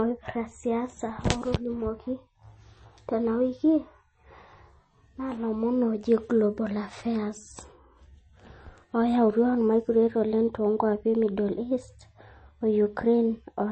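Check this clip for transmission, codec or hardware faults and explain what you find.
One codec fault runs through the whole speech clip. From start to finish the speech sounds watery and swirly, with a metallic chirp on s sounds and smeared consonant attacks, and nothing reaches above 8.3 kHz. This is likely MP3 compression. Starved of bits, the encoder chops the treble at a fixed cut-off and drops weak frequency lines, which flicker on and off between frames. The damage is plainly audible and points to a low bitrate of roughly 33 kbps.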